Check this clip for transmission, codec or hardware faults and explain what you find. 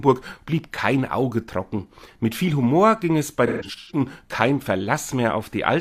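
There is one codec fault. From 3.47 to 4.00 s there is AAC frame loss with concealment: about 299 ms of frames go missing in bursts across 427 ms, the longest near 150 ms. The decoder rebuilds each gap from the last good spectrum, giving smeared, noisy, phasey patches.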